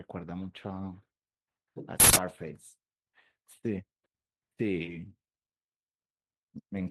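At 2.00 s, an uninitialised buffer about 160 ms long was sent to the output before any audio had been written into it, so stale memory contents played as samples. The result is a sudden, very loud burst of harsh digital noise lasting until 2.16 s.

From 5.05 to 5.11 s, a lost packet was rebuilt from error correction: the decoder filled roughly 40 ms using the low-bitrate backup copies carried in the following packets, which suggests two lost packets. There is no gap, but the speech briefly turns rougher and noisier.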